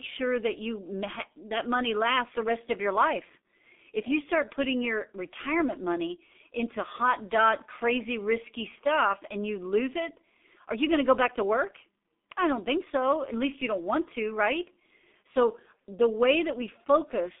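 From start to finish the speech carries heavy G.723.1 codec damage. The line passes roughly 250 Hz to 3.6 kHz, and nothing above 3.7 kHz survives, so sibilants and bright consonants lose their edges and the sound is muffled. The coarse, hoarse texture and smeared transitions fit a bitrate near 6 kbit/s, where the 30 ms frames force the coder to update its voice model too slowly to track fast changes.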